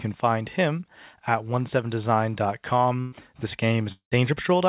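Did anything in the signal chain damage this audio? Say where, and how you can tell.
Yes, the network stage damaged it. At 3.00 to 3.15 s the sound stalls: the last sound is carried on for about 120 ms and turned down as it goes, then the audio picks up further along, with about 120 ms missing. This is a burst of packet loss. Packets were lost or arrived too late for playout, and the receiver's concealment covered the gap by extending the last sound and fading it.

From 3.92 to 4.14 s the audio breaks again and for longer. A continuation of the last sound fades away, and about 110 ms of silence follows before the audio returns further on, with about 200 ms gone. The likely cause is a long network dropout: nothing arrived for that stretch, and concealment ran out before the stream resumed. Across the whole clip nothing is heard above 4 kHz, which fits a narrowband call codec on a normally working call path.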